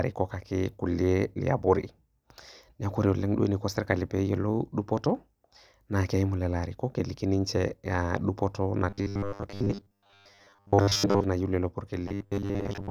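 Speech that turns into a robotic sound from repeated short buffers from 8.90 to 11.24 s and again from 12.08 s to the end. The voice becomes a rigid metallic buzz at 100 Hz, likely from a 10 ms slice being replayed when new audio arrives too late. Most of the real audio in those spans is skipped. On a spectrogram the stretches show evenly spaced horizontal bands at 100 Hz and its harmonics, and the waveform shows one short shape repeating.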